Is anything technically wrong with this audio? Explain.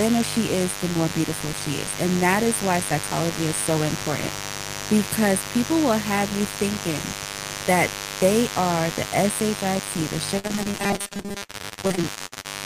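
Yes, there are three problems. A 50 Hz mains buzz runs through the whole recording, sitting only about 10 dB below the speech. Sharp switching spikes, such as from a dimmer or rectifier, leak in twice per mains cycle. They produce a stack of harmonics of 50 Hz reaching into the kilohertz range, so this is a steady, raspy buzz rather than a smooth low hum.

From 10.39 s to 12.46 s there is repeated packet loss with a robotic sound. There are 29 separate gaps, the longest 60 ms, and each is patched by stretching the last bit of sound. About 39% of that span is concealed rather than real audio, so the speech turns choppy with pieces missing. Its scattered holes separate it from the steadier, regularly pitched effect inside it.

Between 10.78 s and 11.42 s there is robotic sound from repeated short buffers. Most of the sound there is a fixed 200 Hz metallic buzz that roughly tracks the speech. 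That pitch matches a 5 ms chunk being replayed over and over while real audio is skipped, likely because new audio arrived too seldom. Its constant pitch, rather than scattered holes, distinguishes it from the surrounding packet loss. The pitch also separates it from the 50 Hz mains buzz.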